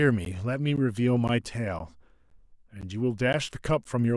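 Gaps between chunks cut the speech at 0.25, 0.76, 1.28, 1.79, 2.30, 2.81, 3.33 and 3.84 s. The audio arrives in 0.5 s chunks, and 13 ms of silence sits at each join. Nothing is lost. Each gap is a brief, hard-edged hole, repeating steadily.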